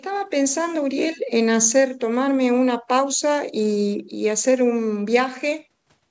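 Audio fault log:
Nothing to flag here; the speech comes through the call microphone processing and the WebRTC call path just as you'd expect, with the usual top end stopping around 8 kHz.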